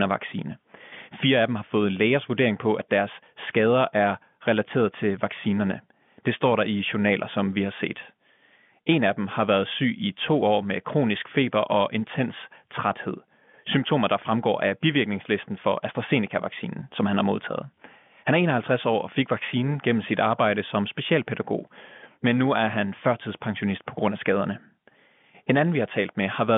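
Nothing goes wrong anywhere in this speech, which comes over a G.711 telephone line with the usual narrow band of roughly 150 Hz to 3.5 kHz.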